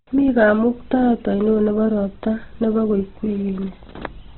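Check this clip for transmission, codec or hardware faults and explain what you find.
One codec fault runs through the whole speech clip, likely Opus compression. Nothing reaches above 4.1 kHz, so the sound is narrowband, muffled and grainy, and vowels turn rough and noisy. That fits music-mode Opus at about 12 kbps, where empty bands are filled with folded or noise energy. On a spectrogram there is a flat ceiling at 4.1 kHz and a smeared, speckled texture below it, with no clean harmonics.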